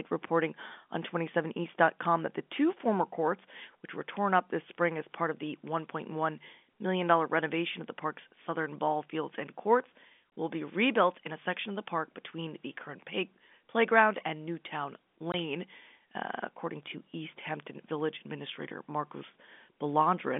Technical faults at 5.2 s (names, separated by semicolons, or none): none